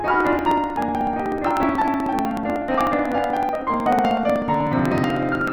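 From 0.08 s to 5.48 s the music carries a steady train of small ticks, one every 62 ms. These are periodic USB or driver dropouts: at each stall a couple of milliseconds of music are skipped outright, and the abrupt splice clicks.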